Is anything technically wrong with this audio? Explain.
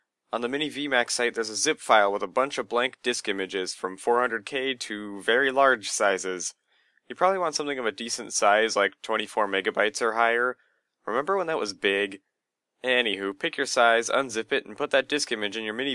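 No, nothing technically wrong can be heard here.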